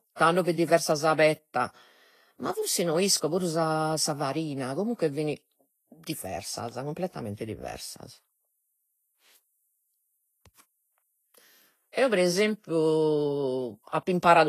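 Heavy lossy encoding, likely Vorbis compression at a low quality setting, has left its mark on this speech recording for its entire length. Nothing reaches above about 14.2 kHz, where the encoder cut the band, and below that the treble was quantised so coarsely that fine detail turned into hiss of similar energy. The damage is plainly audible as a grainy, roughened top end and softened consonant attacks, which points to a bitrate somewhere near 28 kbps.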